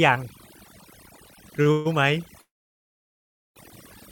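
Overdone noise removal runs through the whole speech clip. The noise reduction was set so hard that frequency bands near its noise estimate are pushed down or switched off, including quieter parts of the voice. The background drops and breaks up into twinkling specks.

A short stall from a late packet comes at 1.62 to 1.67 s. A packet missed its slot and the jitter buffer emptied, so the last sound is held for about 34 ms. Playback then resumes from the same point, leaving a brief drag with nothing lost.

Call audio freeze follows at 1.71 to 1.87 s and again at 2.41 to 3.58 s, likely from delayed packets draining the jitter buffer. The first holds the last sound as a fading buzz or hiss. The second sits mostly in silence for about 1.09 s before speech resumes where it stopped.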